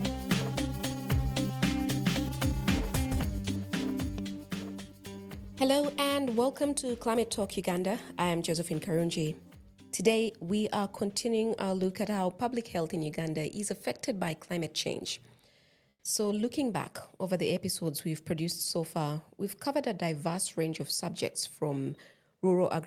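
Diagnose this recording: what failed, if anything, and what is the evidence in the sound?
Between 15.89 and 16.03 s, a pause of about 140 ms, the real background, sitting about 42 dB below the loudest passages, is replaced by comfort noise: a steady, featureless hiss about 6 dB quieter, with none of the texture around it. This points to the codec stage, likely Opus running discontinuous transmission: the sender stopped sending frames during the gap, and the receiver filled it with synthetic noise shaped only roughly like the original background.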